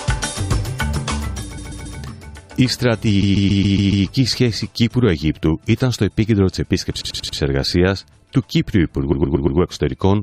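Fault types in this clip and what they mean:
Repeated frames: a run of compressed frames is decoded again, so blocks of 93 to 139 ms replay three to six extra times near 1.57, 3.22, 7.00 and 9.11 s. Unlike a dropout, nothing goes missing and the audio just lengthens.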